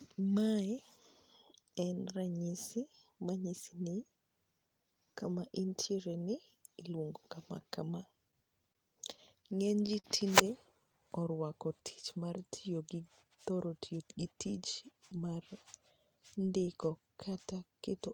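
At 8.73 s a short stall from a late packet holds the sound for about 21 ms. The jitter buffer ran dry, so the last sound stretches before resuming intact.

From 9.17 to 10.06 s repeated stalls cause a stutter. Five gaps total 86 ms, the longest 43 ms. The speech drags in small hitches without losing anything.

From 13.65 to 14.09 s a jitter buffer speed-up plays the speech at 111% speed. Roughly 50 ms of pitch periods are cut, so it sounds hurried at unchanged pitch.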